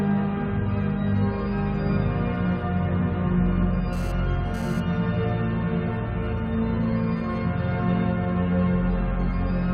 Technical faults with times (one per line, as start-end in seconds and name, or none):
3.93-4.80 GSM phone buzz